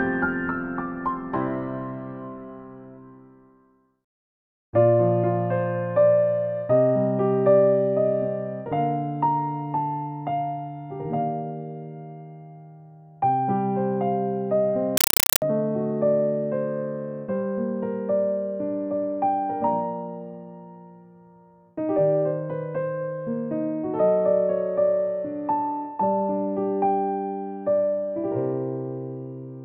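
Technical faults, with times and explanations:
14.97–15.42 s, compressed stream played as audio: an undecoded AC-3 bitstream, which fits a 256 kbps stream, plays as loud chattering static made of 5.33 ms noise bursts at 31.25 Hz. The waveform shows loud noise blocks between near-silent gaps, and the spectrogram shows evenly spaced broadband vertical stripes.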